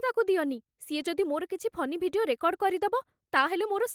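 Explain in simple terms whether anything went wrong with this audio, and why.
Nothing went wrong with this speech recording.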